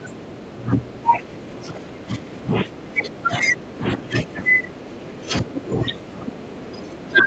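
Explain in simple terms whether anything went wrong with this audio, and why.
Speech suppressed in double talk, likely because the echo canceller confused the talker with returning echo, makes the voice sink sharply or break up from 0 to 7.26 seconds.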